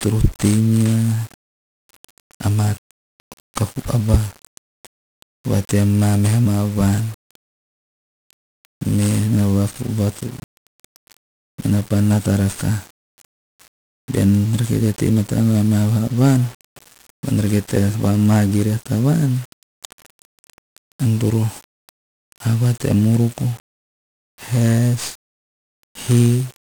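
Right through the speech you get heavy 1-bit DFPWM compression: one bit per sample nudging an adaptive level, so everything's fuzzy and crackly, treble drowned in hiss, which fits a 48 kbps stream.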